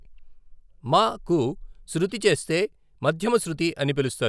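No technical faults are audible anywhere in this speech.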